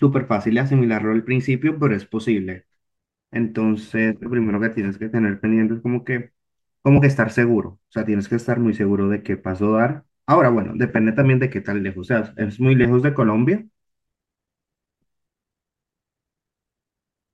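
At 4.23–4.26 s, then at 6.97, 10.89 and 12.84–12.86 s, lost LE Audio frames leave brief noisy smears where the LC3 decoder repeats the last spectrum with random signs. The first gap is about 30 ms, fitting three 10 ms frames, and the others fit one frame each. Unlike a dropout, the gaps are filled with hiss, not silence or clicks.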